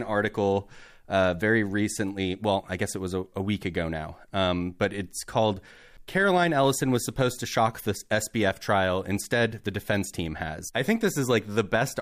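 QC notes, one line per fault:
5.97 s, CD skip: right after "um but it's called", a tick and a very brief mute of around 10 ms, then the speech resumes from a different point on the disc, because a knock or a surface flaw made the laser jump to another turn of the spiral.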